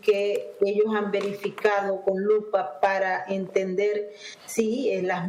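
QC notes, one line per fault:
Nothing to flag here; I didn't hear anything worth a note anywhere in the audio.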